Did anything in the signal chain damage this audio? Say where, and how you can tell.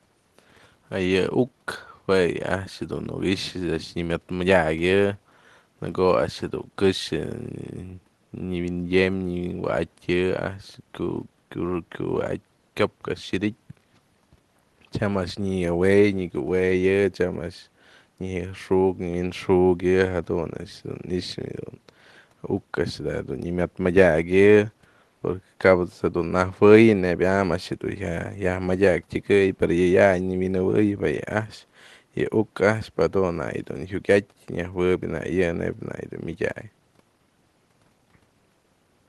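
No, nothing in the chain damaged this speech: the faint room noise sits about 43 dB below the speech as part of the recording, and the call path's band limit near 12 kHz fits Opus at a modest bitrate of around 24 kbps.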